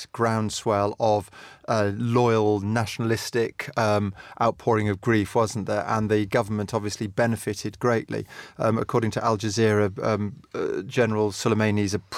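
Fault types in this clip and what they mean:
Nothing stands out here; I couldn't pick out any fault in this speech recording.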